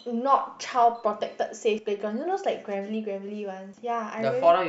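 At 1.79 s and 3.74 s the speech skips forward. Roughly a twentieth of a second is gone each time, and the edges are joined with no gap. Spaced about two seconds apart, this is likely audio missing between chunks. A dropout would leave silence instead.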